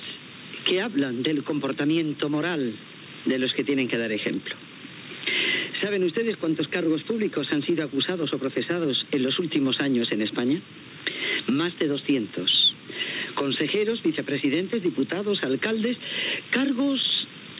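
No technical faults can be heard anywhere in the audio.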